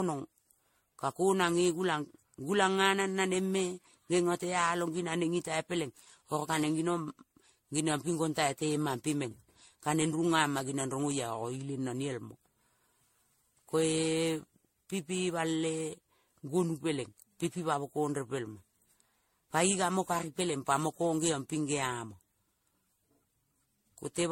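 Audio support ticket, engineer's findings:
Swirly, smeared, hollow speech across the whole clip, consonant attacks blurred, nothing above 16.5 kHz. Probable component: the transcode chain, likely generation loss from around ten MP3 passes at roughly 64 kbit/s. Each re-encode quantises on a shifted frame grid, so noise and spectral holes pile up beyond what one pass at that rate would give.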